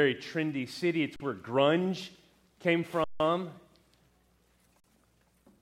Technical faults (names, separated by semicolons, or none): underrun with held sample